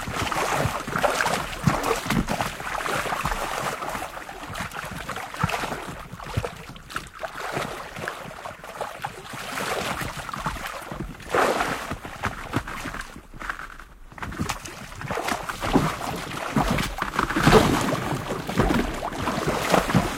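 No technical faults can be heard anywhere in this recording of everyday sounds.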